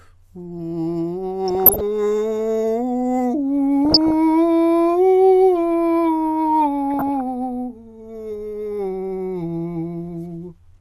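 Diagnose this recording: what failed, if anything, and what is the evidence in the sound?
The failure is at the codec stage of a DAB broadcast chain. With weak reception, bit errors slipped past error correction into the MP2 audio data, at a rate of a few tenths of a percent. This is DAB burbling. From 1.48 to 1.81 s, 3.85 to 4.14 s and 6.94 to 7.21 s the music picks up burbling blips. Each burst lasts about 0.3 s, which fits a dozen or more corrupted frames in a row. Within each frame, damaged samples put short blips of noise in single sub-bands, and damaged scale factors make sub-bands jump in level.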